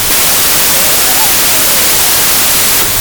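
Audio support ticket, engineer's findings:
Wrong sample width: packed 24-bit data read as 32-bit integers, probably in the decoder or file reader. Each read value straddles sample boundaries, so mismatched bytes form most values. Whole clip: loud noise burying the music, running about 1.33x fast, pitch raised accordingly.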